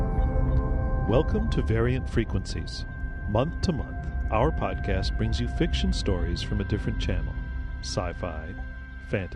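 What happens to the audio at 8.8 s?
MP2 compression is present at 8.8 s, as it is throughout the audio. The damage is plainly audible: the sound is dull, with a gurgling, granular grain. The likely cause is MPEG Layer II coding at a starved bit allocation, consistent with a rate around 80 kbps. With so few bits spread across its 32 sub-bands, the encoder switches upper bands off, lets bands flicker in and out, and coarsely quantises those it keeps.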